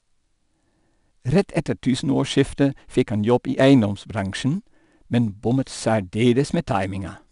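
Speech, with 4-bit ADPCM compression throughout. A gritty hiss rides on every loud syllable and rises and falls with the level. Sharp attacks distort where the step size lags. Nothing sounds above 10.6 kHz, which fits a stream near 89 kbps.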